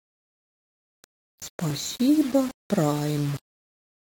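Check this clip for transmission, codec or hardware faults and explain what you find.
One fault runs through the whole clip: low bit depth without dither. The speech carries a grainy, gritty distortion that tracks the voice and changes with its level. Quiet passages sound rough. The softest parts sputter or drop to silence. The error sits only about 20 dB below the speech. The likely cause is coarse rounding to very few levels, which fits roughly 5-bit quantisation with no dither to break up the error.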